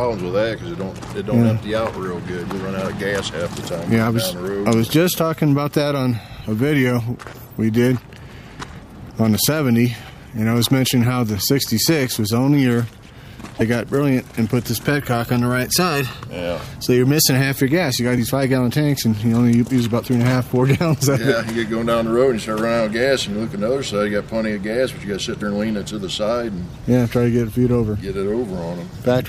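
At 6.96–7.01 s, 13.57–13.62 s, 18.14–18.18 s, 25.38–25.42 s and 28.91–28.95 s you get short blips of about 40 ms each, all from damaged data in the compressed stream. In those spots some of the encoded bytes are wrong, so the decoder misreads the frames, loses its place and has to hunt for the next valid header before playback settles. What you hear is a quick chirp or squawk cutting into the sound.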